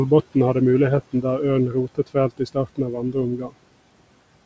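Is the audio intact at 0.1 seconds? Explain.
Yes, the speech is intact at 0.1 seconds, with no dropout, click or distortion at that moment.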